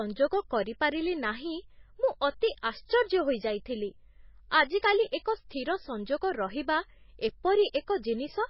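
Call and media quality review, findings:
MP3 compression, whole clip: dull, nothing above 5.6 kHz, heavy watery swirl on the speech. Likely a starved MP3 encode, around 18 kbps by the sound: treble lowpassed off, weak spectral lines dropping in and out between frames.

Pre-echo at 7.72 s: brief hiss, about 16 ms, ahead of a sharp onset that lands soft. Same codec; quantisation noise spread across the block bleeds into the quiet gap before the attack.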